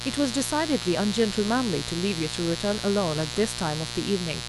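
From the first moment to the end, mains buzz sits under the speech, about 10 dB below it. Sharp switching spikes, entering twice per cycle of a 60 Hz supply through a dimmer, rectifier or unshielded path, spread harmonics up into the kilohertz range, so it sounds raspy and steady rather than a smooth hum. Plain hum would be a soft low tone; this buzz is bright and edgy and never changes with the speech.

From 3.12 to 3.37 s, DAB burbling breaks in. Weak reception let bit errors slip past error correction into the MP2 data. The corrupted samples put short blips of noise into single sub-bands. This fits a short run of a dozen or so damaged frames at an error rate well under one percent. Unlike dropouts or clicks, the sound never stops. Isolated sub-bands blip instead.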